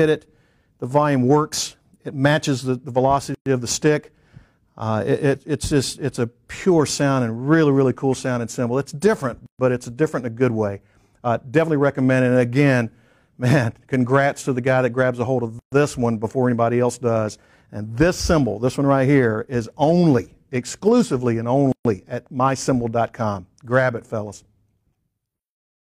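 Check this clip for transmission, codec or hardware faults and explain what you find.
There's one fault here, repeating: a gap at a join of encoded pieces, at 3.35–3.46 s (about 117 ms), then 9.46–9.59, 15.59–15.72 and 21.72–21.85 s (about 130 ms each). The audio was encoded in roughly 6 s chunks and spliced untrimmed, so encoder start delay and final-frame padding leave a dropout, softened at the edges, before the sound picks up where it left off.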